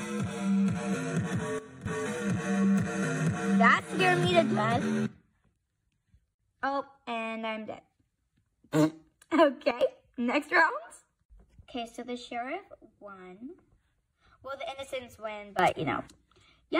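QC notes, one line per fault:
1.59–1.86 s, 9.71–9.81 s, 15.59–16.08 s: sudden gain jump. The level drops about 14 dB, then about 12 dB, then rises about 15 dB. Sound and background noise jump together, likely from gain changes applied without a ramp.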